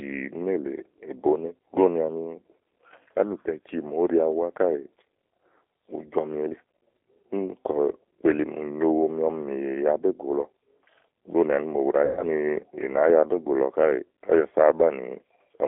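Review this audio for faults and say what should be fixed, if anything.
G.729 codec, throughout: the audio is confined to roughly 300 Hz to 3.5 kHz and rebuilt from a vocal tract filter, pitch predictor and a few pulses per frame, so speech sounds rough and synthetic, with plainly audible damage that fits an 8 kbit/s G.729A link. To prevent it, negotiate a wideband codec such as G.722 or Opus.

VoIP packet loss concealed by the speech codec, 12.05 to 12.29 s: about 120 ms of audio went missing, consistent with twelve lost 10 ms frames. The decoder stretched its last pitch and filter into a fading buzzy tone or coloured noise, and speech stays weakened until the decoder recovers. To prevent it, fix the network loss and add forward error correction or redundancy.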